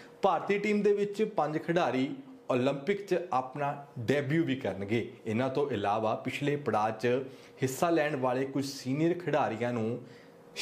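No technical faults can be heard in the audio.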